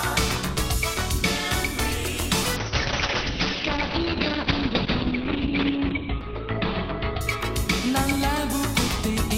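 A call bitrate drop runs from 2.57 s to 8.53 s: the encoder's bit budget collapses, from a level consistent with about 64 kbps to one pointing to roughly 7 kbps, staying at the floor for about 3.1 s. The audio turns rough and watery as coding gets coarser, and the bandwidth shrinks from 20 kHz to 4 kHz. On a spectrogram, everything above 4 kHz abruptly goes blank, leaving blocky, smeared energy below, until full bandwidth returns at 8.53 s.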